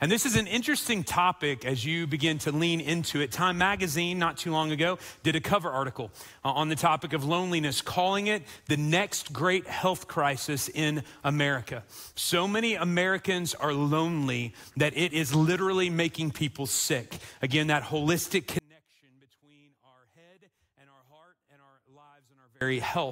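From 18.59 to 22.61 s, the sound collapses by about 33 dB, leaving only a faint residue. The likely cause is one channel inverted. One stereo side has flipped polarity, so material shared by both channels cancels when they are summed to mono.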